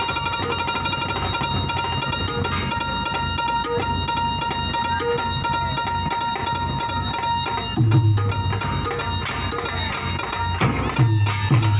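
No technical faults can be heard in this audio.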